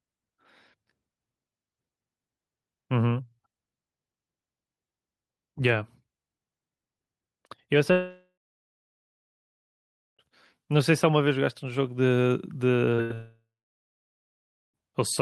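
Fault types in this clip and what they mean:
Long network dropout: At 7.91–10.22 s and 13.14–14.77 s the speech stops, the last sound carries on briefly and fades, then roughly 1.9 s and 1.3 s of silence follow. The likely cause is the network delivering nothing, so 2.3 s and 1.6 s are lost, unlike shorter, fill-only gaps.
Short concealed packet loss: Near 12.95 s about 40 ms of speech is missing and the gap is patched by extending the preceding sound, leaving a quick smear or wobble rather than a fade. Its brevity and lack of any audible decay separate it from the burst.
Burst of packet loss: From 13.02 to 13.13 s roughly 80 ms in a row is gone. The last sound is continued and turned down as the gap goes on, longer than the brief smear before it but with no stretch of silence like the dropouts.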